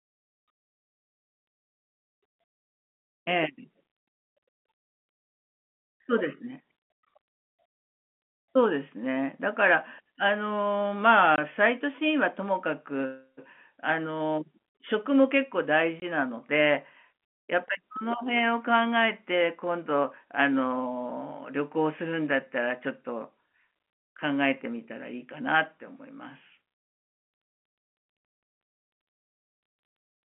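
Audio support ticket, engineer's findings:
Packet loss filled with silence: speech cut by two short, hard-edged holes at 11.36 s and 16.0 s, each about 20 ms, which points to one lost packet apiece. The receiver inserts silence with no concealment, so each gap is left as a hard-edged hole rather than being smoothed over or repeating the previous audio. The narrow 200 Hz to 3.4 kHz telephone band from the G.711 link stays intact across both gaps.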